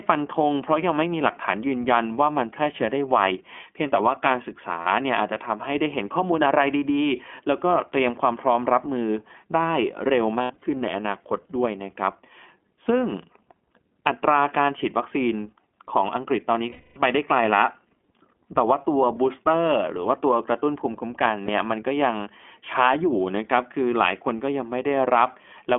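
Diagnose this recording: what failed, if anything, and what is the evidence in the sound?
iLBC codec, throughout: the codec stage holds the speech to roughly 250 Hz to 3.4 kHz with plainly audible rough, synthetic texture, which fits 15.2 kbps iLBC in 20 ms frames.

Lost iLBC frames, at 4.82 to 4.87 s (40 ms), 10.42 to 10.64 s (120 ms scattered, longest run about 70 ms), 16.70 to 16.98 s (260 ms) and 21.46 to 21.50 s (20 ms): network packet loss. The decoder repeats the last pitch cycle with noise, giving a held, buzzy vowel that fades during the longer gaps, and the speech recovers almost at once.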